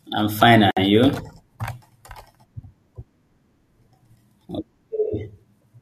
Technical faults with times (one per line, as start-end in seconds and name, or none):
0.71-0.77 gap at a join of encoded pieces